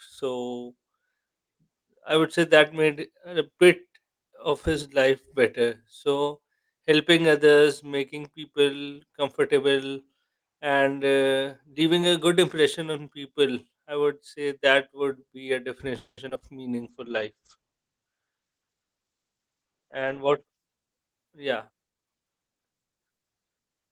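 From 15.97 to 16.42 s, the speech suffers repeated packet loss (robotic sound). Packets went missing four times in under half a second, with the longest hole lasting 200 ms. The receiver patched about 230 ms by stretching out the last good sound, and it left about 80 ms as silence. Roughly half of this stretch is synthetic fill, so the speech turns choppy, with pieces dropped between the patches.

A jitter buffer slow-down follows at 16.71 to 17.09 s. The buffer needed to build up its reserve. The receiver did this by repeating single pitch periods, adding 46 ms in total. Playback runs at 90% speed while the pitch stays the same, so the sounds in this short window come out slightly drawn out and sluggish.

A call bitrate drop begins at 16.84 s and runs to 20.53 s. The bandwidth estimate fell, and the encoder went from 32 kbps down to 11 kbps for the whole 3.7 s. At that rate the codec quantizes coarsely and also cuts the audio bandwidth from 20 kHz to 8 kHz. 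The speech loses its crisp top end and sounds muffled and somewhat watery until the higher rate returns.

A jitter buffer speed-up falls inside that low-bitrate stretch, from 18.04 to 19.47 s. By then the buffer was holding more audio than its target, as happens when delayed packets arrive in a bunch. To cut the latency, the receiver removed short slices of a pitch period or a few, about a fifth of a second in all. Playback runs near 114% speed at an unchanged pitch, so the delivery sounds noticeably hurried.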